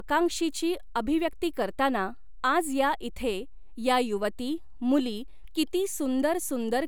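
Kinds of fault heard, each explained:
DC offset: the entire speech waveform sits displaced from zero by a constant amount, about -39 dBFS, for the whole clip. The offset itself is inaudible, but it eats a small slice of headroom. On a waveform view the trace rides slightly off the centre line throughout; on a spectrogram it appears as a steady band of energy pinned at 0 Hz.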